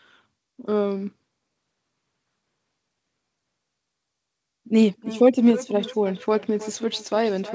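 From 4.97 s to the end, the speech comes back at about 300 ms intervals, thinner and ringing, reaching about 16 dB below the voice: feedback echo between two devices, where a second device's loudspeaker is picked up again by the first microphone, outside the echo canceller's reach.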